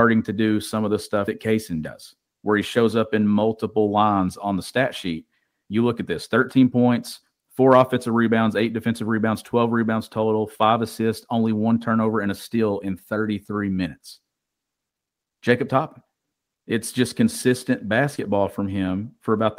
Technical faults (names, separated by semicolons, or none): short concealed packet loss